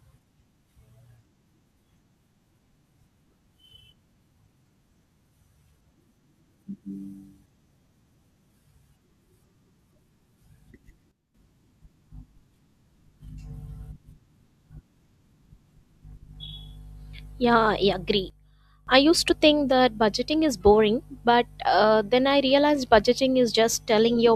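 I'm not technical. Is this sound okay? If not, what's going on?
No. Twice, the volume setting was likely switched instantly instead of smoothly, a sudden gain jump: at 11.1 to 11.3 s and 18.3 to 18.9 s, the speech and the background noise abruptly drop much quieter together, then snap back.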